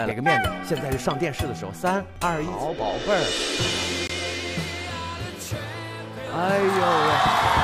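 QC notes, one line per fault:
4.07–4.11 s, Bluetooth dropout: a brief silent hole cuts into the sound, which resumes as though it had kept playing underneath. The likely cause is a wireless packet arriving too late and being discarded. Roughly 21 ms is missing, consistent with one lost frame.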